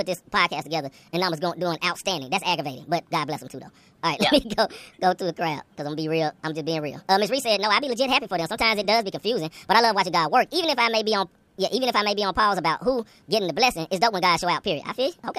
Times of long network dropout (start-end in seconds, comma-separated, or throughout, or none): none